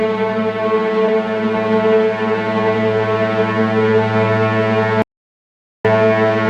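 A recording of everyday sounds with two separate faults. At 1.07 s there is a brief glitch from damaged data in the compressed stream: corrupted bytes make the decoder misread a frame, lose sync and resynchronise on the next valid header. From 5.02 s to 5.85 s the sound cuts off into silence for about 0.83 s, with no background noise, before returning. This is an audio dropout to silence, likely from a momentary loss of input while the recorder kept writing silence, so the sound from that stretch is gone.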